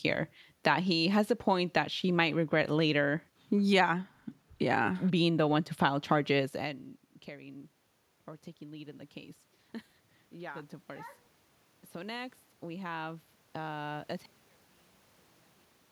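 From 11.93 to 14.14 s there's automatic gain rising. The AGC decided the input was too quiet and eased its gain up by about 4 dB, so the speech and the room noise swell together over those couple of seconds. The earlier level shift around 6.5 s is just the talker moving, not this.

Then at 14.26 s the speech drops by about 36 dB and stays down to the end. That's likely one channel inverted: with one side's polarity flipped, the centred voice cancels when the two are summed to mono, leaving only a faint trace.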